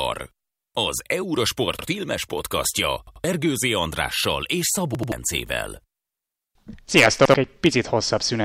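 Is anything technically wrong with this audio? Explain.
Yes. Repeated buffers occur at 0.43–0.51, 1.79–1.88, 3.07–3.24, 4.95–5.12 and 7.25–7.34 s. Late audio made the device replay an 85 ms block, fitting a 4096-sample buffer. Each sounds as a stutter with hard joins, twice at 3.07 and 4.95 s.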